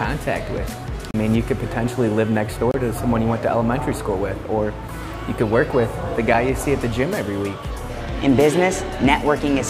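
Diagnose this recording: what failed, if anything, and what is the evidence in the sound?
Buffer stage failure. Blocks of digital silence at 1.11 s (32 ms), 2.71 s (28 ms) and 6.34 s. Unfilled output blocks cut hard.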